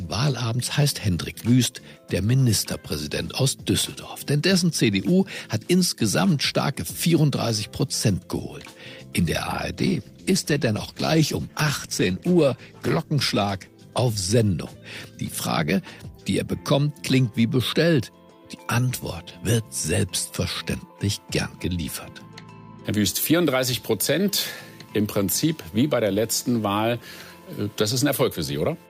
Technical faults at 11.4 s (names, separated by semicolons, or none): call bitrate drop